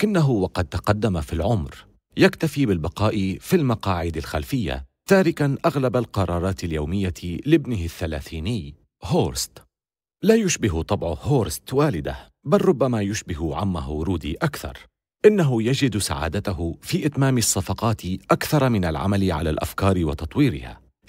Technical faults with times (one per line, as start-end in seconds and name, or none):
none